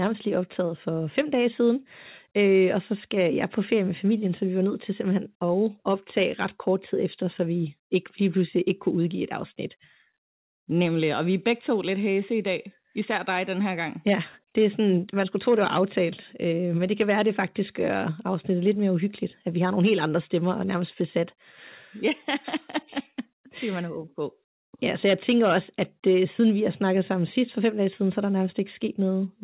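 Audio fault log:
No faults found; the speech has the narrowband character of a call path, with nothing above 4 kHz, which fits G.711 mu-law coding.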